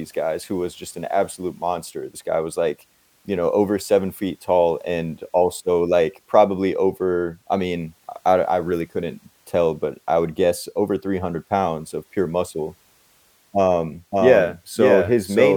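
A doubled audio track enters abruptly at 14.12 s and lasts to the end: a second, full-band copy of the speech trails about half a second behind at roughly equal level, with no decay or room colour, likely from a slower capture path recording it again.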